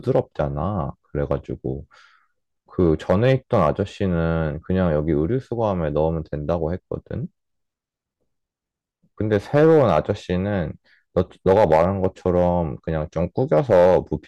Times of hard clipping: 0.15-0.42, 1.31, 2.81-3.69, 6.51-6.53, 9.32-10.11, 11.18-12.48, 13.53-13.98

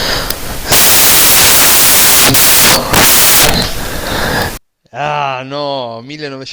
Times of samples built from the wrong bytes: 0.00-4.57

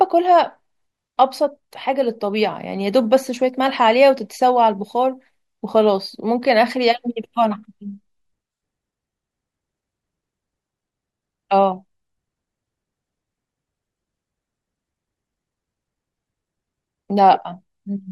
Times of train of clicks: none

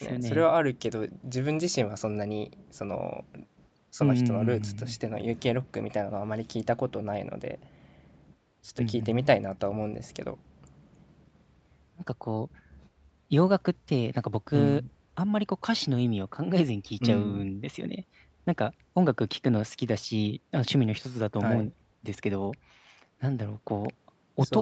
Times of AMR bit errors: none

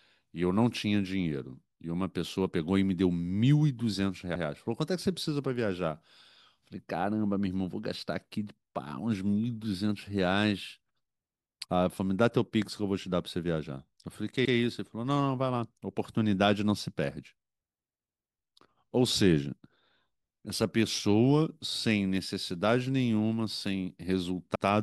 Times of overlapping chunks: 4.35-4.46, 14.45-14.56, 24.55-24.66

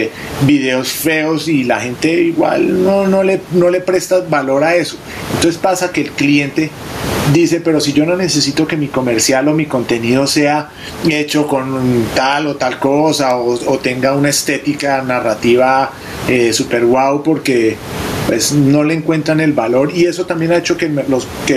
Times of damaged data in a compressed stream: none

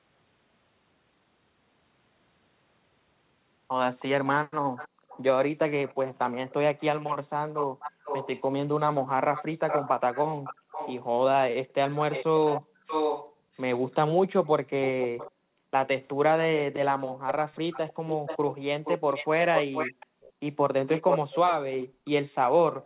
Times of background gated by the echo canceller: 4.89-5.09, 7.66-8.03, 10.61-10.67, 12.61-13.53, 15.31-15.72, 20.06-20.23, 21.86-22.85

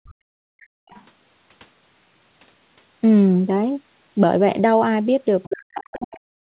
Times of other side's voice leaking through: 0.06-0.14, 0.61-1.04, 5.43-5.48, 6.15-6.19

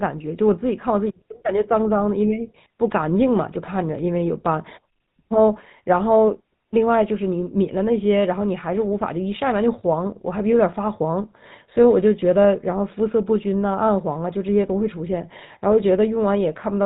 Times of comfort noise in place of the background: none

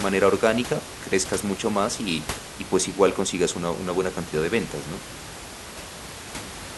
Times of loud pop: none

